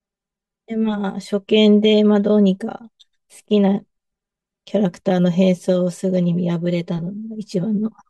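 Throughout the speech, channel delay of around 5 ms causes comb filtering: summed to mono, notches starting near 100 Hz sound hollow and show as evenly spaced spectrogram bands.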